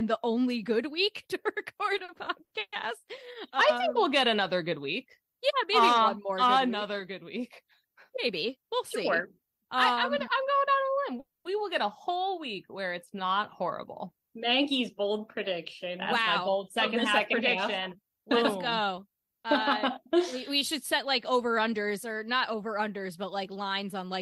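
From 1.97 to 2.74 s the audio goes through repeated stalls (stutter): five short holds, the longest 130 ms, together making up about 270 ms, or roughly a third of that span. Packets kept reaching the receiver late, so its jitter buffer ran dry several times over, and each time the last sound was stretched, fading during the longer holds, until data arrived. Because every hold is later made up, nothing is skipped. The passage drags and catches rather than dropping out, and it is a run of several brief stalls rather than one long one.

Jitter buffer speed-up follows at 8.09 to 8.96 s, running at 108% and trimming around 70 ms, then at 9.38 to 9.72 s, at 111% and trimming around 50 ms. The buffer had built up more delay than it wanted, so the receiver cut out many tiny pitch-period slices in quick succession. Pitch stays put while timing tightens, so these stretches sound hurried, not chipmunk-like. 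That is what separates this from a resampling or clock error, which would also raise the pitch.

At 11.2 to 11.47 s there is a call audio freeze lasting about 250 ms. The last sound is held and fades, and about 180 ms of that time is silent before the audio picks up exactly where it stopped, with nothing missing. The likely cause is packets held up in transit, which emptied the buffer and added about 250 ms of delay. It differs from the stutter in being a single longer hold that decays into silence, not a cluster of short catches.

A further jitter buffer speed-up follows from 16.15 to 18.17 s, at 105% and trimming around 100 ms. This stretch is longer and gentler than the earlier ones, so the quickening is subtler. It comes across as a slight, steady rush rather than an obvious jump in pace.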